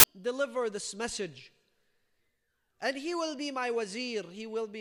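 From 0 to 0.04 s, just before "deliver this message", a blast of very loud white noise with hard edges is file tags played as audio: embedded cover-picture data read as samples. Unlike a click or glitch, it is a dense block of static, not a single spike.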